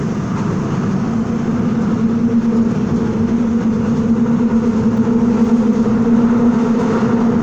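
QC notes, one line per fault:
Nothing to flag on this one; the sound came across with no technical faults to log.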